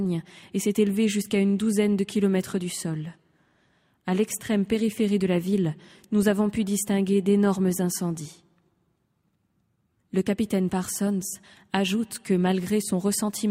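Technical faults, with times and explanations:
No technical faults detected anywhere in this speech recording.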